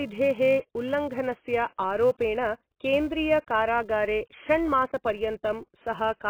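From start to finish, the top of the spectrum is cut off, and the speech sounds dull, smeared and fizzy on sibilants. Likely cause: heavy AAC compression at a low bitrate. The sharp cut-off plus warbling texture separates it from simple low-pass filtering, which would stay clean.

Also throughout, a steady buzz at 375 Hz rides on the speech and rises and falls with its level. This fits a filter restarted on every block, which fits a 128-sample block starting from silence each time. Unlike mains hum, it vanishes in pauses.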